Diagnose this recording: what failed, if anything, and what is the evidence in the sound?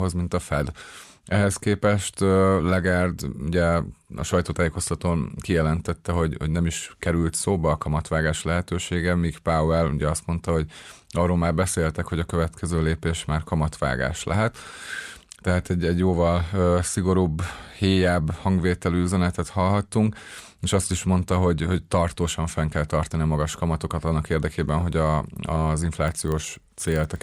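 A block-based filter in the processing stage resets its state at every block boundary, a filter restarted on every block. From 26.08 s to the end at 27.22 s, the speech carries a 25 Hz buzz, one small transient every 40 ms, rising and falling with the speech level.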